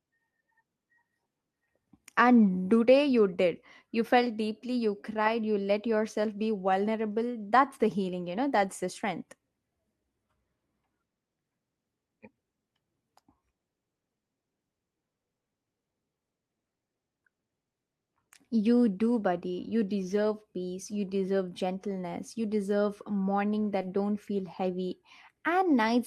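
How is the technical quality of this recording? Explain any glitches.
The speech carries several brief rough patches and one short smear, all from network packet loss during the call.

Lost packet rebuilt from error correction: at 8.57–8.67 s, 20.03–20.13 s, 20.85–20.99 s, 23.83–23.85 s and 24.63–24.65 s the sound turns grainy and noisier for 20 to 80 ms without ever dropping out. The missing audio was replaced by a low-bitrate backup copy carried in the following packet.

Short concealed packet loss: at 23.81–23.85 s there is a brief smear lasting about 40 ms. For 20 ms nothing arrived in time, so the decoder extended the preceding sound to fill the hole, then blended back into the real signal, where a backup copy covered the rest.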